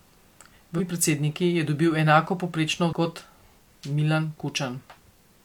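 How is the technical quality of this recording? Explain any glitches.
Two short glitches break up the speech. Brief glitches at 0.75 to 0.81 s and 2.88 to 2.94 s come from damaged data in a compressed stream: corrupted bytes make the decoder misread those frames and lose sync until it finds the next valid frame header.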